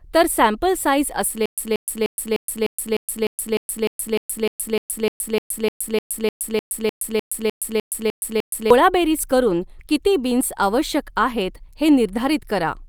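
Playback likely stalled and kept retrying, producing a stutter with silent gaps from 1.46 to 8.70 s: a 181 ms fragment of the speech replays 24 times, each followed by 121 ms of digital silence, a steady 302 ms cycle, while the intervening audio is lost.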